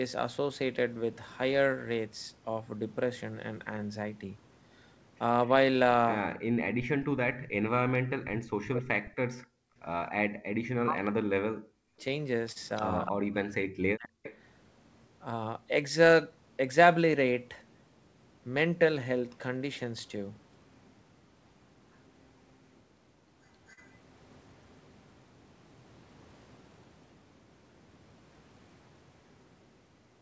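From 6.44 to 14.21 s the talker keeps dipping deeply and breaking up in pieces, adding up to roughly 5 s of damaged speech. That's speech suppressed in double talk, likely from the echo canceller failing to tell the near talker from loudspeaker echo while both sides spoke, so it clamped down on everything.

Inside that stretch, at 9.60 to 9.76 s, the room sound drops out by about 34 dB for roughly 150 ms. That's background gated by the echo canceller: it slammed the mic down while the loudspeaker was playing, then let go, and the ambience snaps back.

Echo leak shows up three times, each a copy of the voice trailing 264 ms behind, likely from a loudspeaker-side canceller letting residual pickup through. There's a brief scrap at 10.06 s about 20 dB down, a strong stretch from 11.98 to 15.06 s only about 10 dB under the speech, and a faint one from 20.74 to 23.94 s about 30 dB down.

There are three short stalls from a late packet, at 12.52 s (36 ms), 19.58 s (23 ms) and 23.73 s (40 ms). 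Each time the jitter buffer ran dry, so the last bit of sound gets held too long, with a slight buzz or dip, until the packet turns up. Nothing is actually lost. All of this sits on the G.722 call path, where nothing comes through above 8 kHz.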